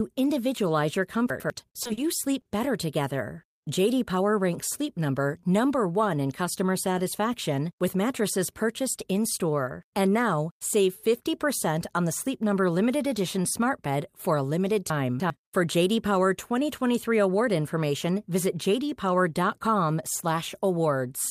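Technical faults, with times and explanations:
1.3 to 1.5 s, chunks out of order: just after "individualize your", a 100 ms piece of the speech plays one chunk later than it should, after the piece that belongs behind it. No audio is lost, but the sequence is swapped and the splices leave three hard joins. The result is a brief jumbled stutter, as if the syllables were shuffled.
1.83 to 1.87 s, 1.87 to 1.91 s, 1.93 to 1.99 s and 2.41 to 2.47 s, short concealed packet loss: four gaps of 20, 20, 40 and 40 ms never reached the decoder. The receiver covered each one by extending the preceding sound, continuing its pitch where it was voiced and using shaped noise where it was not, and then crossfaded back into the real signal. These gaps fall just before "sleep better together" and again before "better together", where the speech briefly smears and wobbles.
14.9 to 15.3 s, chunks out of order: a 100 ms chunk arrives three chunks late and plays after material that should follow it. 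Nothing is missing, but the misordering creates three abrupt joins across this span. It is heard as a garbled, scrambled moment.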